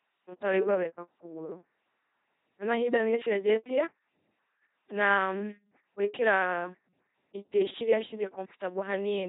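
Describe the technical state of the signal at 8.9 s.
At 8.9 s the speech remains under the LPC-10 vocoder, which fits a 2.4 kbit/s rate and runs throughout the clip. A pulse-or-noise excitation drives a short filter, giving buzzy, robotic speech with nothing above 3.8 kHz.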